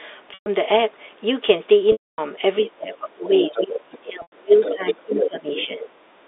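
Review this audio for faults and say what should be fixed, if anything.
Packet loss with pitch repetition occurs at 0.34 to 0.46 s (120 ms lost), 1.92 to 2.18 s (260 ms) and 4.22 to 4.32 s (100 ms). The receiver loops the last pitch period and fades it out over about 50 ms, so each gap fades toward silence before the sound returns. Prevent it with a larger jitter buffer, FEC or a better network path.

The other side's voice leaks through at 2.65 to 2.71 s, 3.29 to 3.98 s, 4.61 to 4.94 s, 5.17 to 5.29 s and 5.56 to 5.66 s. It sits around 20 dB below the talker at first, rising to only a few dB below at 4.61 and 5.17 s. This is likely loudspeaker echo that the echo canceller left in the microphone signal. Use a headset or retune the echo canceller.

Speech is suppressed in double talk at 2.77 to 3.24 s, 3.49 to 5.49 s and 5.66 to 6.01 s. The talker dips by up to roughly 20 dB in the first two stretches and about 15 dB in the last, while the far side speaks. 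The likely cause is an echo canceller that attenuates both directions when it cannot separate them. Improve its double-talk detection so that it stops muting the near-end talker.

The 300 Hz to 3.7 kHz telephone band from G.711 coding is heard as normal line character and needs no fix.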